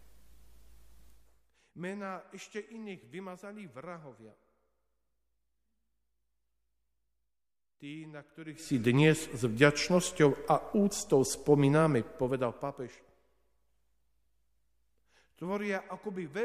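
No technical faults can be heard anywhere in this audio.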